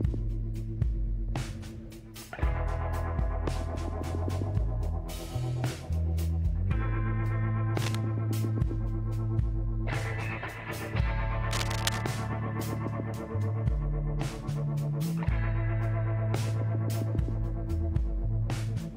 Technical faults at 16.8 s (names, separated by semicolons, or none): none